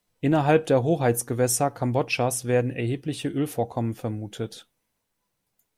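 No technical faults are audible in this recording.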